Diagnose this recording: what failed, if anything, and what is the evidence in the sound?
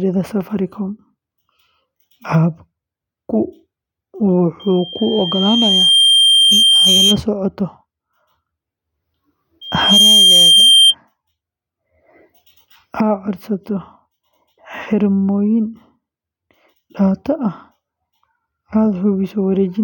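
Loudspeaker feedback squeal in the analogue acoustic loop: a 3.2 kHz tone swells from 4.59 to 7.20 s and, faster and louder, from 9.61 to 10.95 s. It shows as a bright horizontal spectrogram line because loop gain exceeded one there.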